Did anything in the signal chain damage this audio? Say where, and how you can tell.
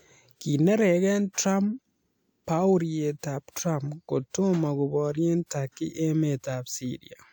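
No, nothing in this speech recording stood out as damage from any stage of the chain when I listened to it.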